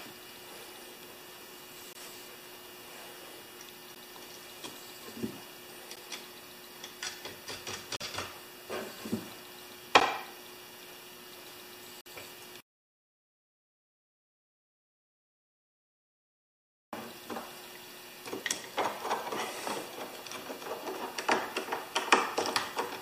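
Gaps between stream segments fall at 1.93, 3.95, 5.96, 7.96, 10.00 and 12.01 s, roughly every 2 s, at segment joins. Each is a hard-edged silent hole of 11 to 51 ms. Unlike a dropout, the sound resumes exactly where it stopped, with nothing missing.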